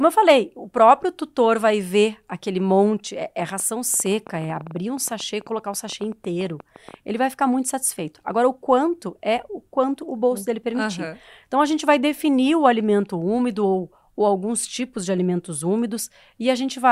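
A train of clicks runs through this speech clip from 3.40 s to 6.95 s, starting just after "aquele monte é é". About forty similar clicks arrive at roughly 10.7 per second with irregular spacing, peaking near the speech level. The likely cause is interference from nearby equipment or a faulty connection or power supply.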